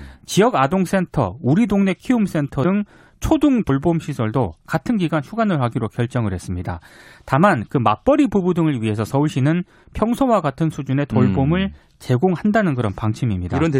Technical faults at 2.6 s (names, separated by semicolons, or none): compressed frames skipped